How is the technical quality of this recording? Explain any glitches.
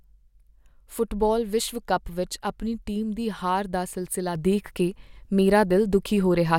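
The recording has one technical fault: a sudden gain jump at 4.35 s that lasts to the end of the clip. From that instant the level rises by about 6 dB in a single step, with no fade. The likely cause is a digital gain setting applied between one sample and the next without a ramp. Because the change acts on the whole signal, the speech and the background noise grow louder together and stay at the higher level through the end.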